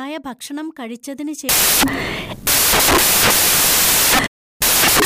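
From 1.49 s to the end, the speech turns into samples built from the wrong bytes: the byte order or alignment is misread, so rapidly varying low bits land in the most significant positions, producing loud, harsh broadband noise that is close to white on the louder sounds.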